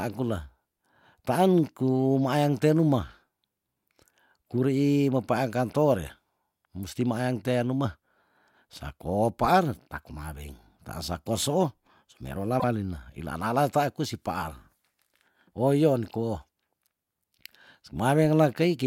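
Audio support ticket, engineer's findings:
Speech jumps forward with a brief chirp, noise burst or short hole, 12.59 to 12.64 s (50 ms). Likely a broken MP3 bit reservoir: frames dropped upstream, so the next frame reads bytes from the wrong frame; the span fits roughly two 24 ms frames. On a spectrogram it shows as a smeared broadband smudge or gap at 12.59 s with the speech pattern discontinuous across it. The waveform shows an abrupt envelope jump there.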